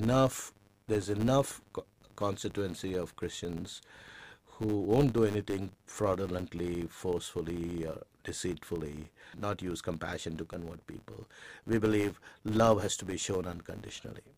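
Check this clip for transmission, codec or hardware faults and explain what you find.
One fault runs through the whole clip. A filter restarted on every block resets its state, so each block opens with a small transient. This makes a 100 Hz buzz that tracks the speech level, which fits blocks of 10 ms.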